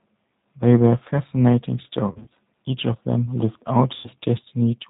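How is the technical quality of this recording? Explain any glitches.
The technical quality is limited: the speech is clear enough to follow but sounds thin, slightly rough and synthetic throughout, with two brief dropouts. There is no content above 4 kHz, so sibilants lose their crispness, and the voice has a processed edge. This is the G.729 codec at work, and the sound fits an 8 kbit/s stream. It rebuilds each short slice of speech from a model of the vocal tract, a pitch predictor and a handful of pulses instead of sending the waveform itself, so fine detail is lost.

Between 2.10 and 2.30 s, and again from 3.94 to 4.10 s, the voice briefly smears into a stretched sound that fades, weakens and sounds distorted. This is VoIP packet loss concealed by the speech codec. In the first event about 120 ms of audio went missing, scattered across 200 ms in runs of up to 30 ms. The second lost about 100 ms. 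Each time, the decoder filled the gaps by extending its last pitch and filter settings at falling gain.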